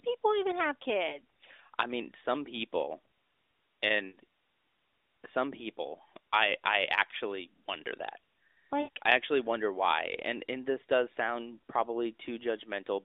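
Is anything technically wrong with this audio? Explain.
Yes, there are three bursts of lost AMR speech frames: a brief warble at 1.1 s right after "people even have", then longer smeared, fading gaps at 4.08 s and 8.82 s, the last just before "I actually wonder why". Each time the decoder lost a frame and filled in by reusing the last good pitch and vocal tract settings at falling gain. The first sounds like a single 20 ms frame; the later two fit about 60 ms of loss. It's all coming through the AMR narrowband codec, so the sound is band-limited to the phone line.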